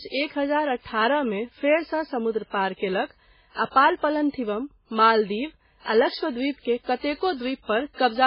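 Throughout the speech the sound is watery and swirly, with heavy codec damage: weak frequency components flicker on and off between frames, and nothing is present above 5.3 kHz. The likely cause is MP3 compression at a very low bitrate, which fits about 16 kbps, where the encoder discards weak detail and cuts the treble.

From 6.59 to 6.65 s, a short hiss of about 57 ms leads into an attack, which sounds softened and smeared. This is pre-echo: the quantisation noise meant for the loud onset spreads across its whole transform block, so it also fills the quiet moment before it.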